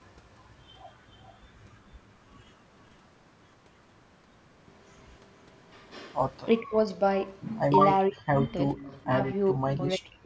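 From 6.61 to 7.01 s the speech dips sharply, by roughly 30 dB at its lowest, for about a fifth of a second in total. This is speech suppressed in double talk, likely because the far side was talking at the same moment and the echo canceller, unable to separate the near talker from loudspeaker echo, turned everything down. It returns from 8.09 to 8.51 s, deeper at around 40 dB and lasting about 0.4 s in total. Unlike a network dropout, the level is pulled down rather than cut to digital silence with a click or repeated fragment.

From 8.77 to 9.06 s a faint delayed copy of the speech appears, trailing the original by 465 ms and sitting about 20 dB below it. This is an echo leak, likely because the loudspeaker sound reached the microphone and the canceller did not fully remove it. The fixed lag and the fact that it copies speech already heard set it apart from room reverberation, which would smear continuously instead of repeating at a set delay.

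From 9.07 s to the end, suppression returns in patches totalling about 0.7 s and reaching roughly 40 dB down, chopping the speech in pieces. The band tops out at 8 kHz, consistent with the call's microphone path.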